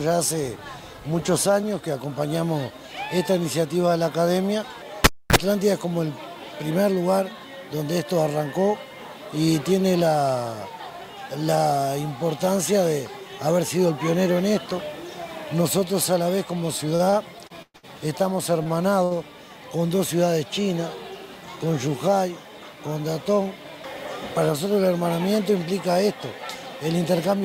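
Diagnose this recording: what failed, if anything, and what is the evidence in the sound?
Analogue wiring: a cable pulled and plugged in at 5.04–5.36 s. A pop, about 265 ms of near silence, then a brief 60 Hz mains buzz before a second pop, unlike a digital dropout.

Network, jitter buffer: repeated stalls (stutter) from 16.95 to 17.85 s. Seven held-over fills, the longest 121 ms, drag the sound without losing any of it, unlike packet loss.

Network, jitter buffer: two short stalls from late packets, at 18.63 s (26 ms held) and 19.04 s (67 ms held). Each is a single stretched sound that resumes in place, not a repeating stutter.

Network, jitter buffer: a jitter buffer speed-up at 21.59–22.15 s. Around 50 ms of pitch periods were trimmed, so the sound runs about 8% faster at the same pitch, unlike a resampling error.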